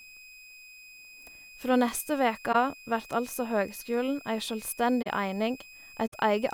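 A switching supply whistle runs through the whole speech clip: a thin high tone wandering between 2.49 and 2.53 kHz, roughly 20 dB below the speech. A power converter is cycling at an audible rate, and its pitch shifts slightly as the load changes. On a spectrogram it is a narrow, slightly wavering horizontal line across the full width. In the waveform it shows only as a fine fuzz riding on the signal.

A corrupt frame concealed appears three times. Just after "neste veke", from 2.52 to 2.55 s, there is a brief soft-edged dip. Two more follow, from 5.02 to 5.07 s and from 6.07 to 6.14 s. Each time, damaged coded frames were detected and the decoder filled the gap itself, so there is a muffled hole or smear rather than a click, and timing stays intact. The longest gap fits about four lost frames. A spectrogram shows short vertical smudges or pale gaps with blurred edges, and the waveform shows a brief, gently tapered dip in amplitude.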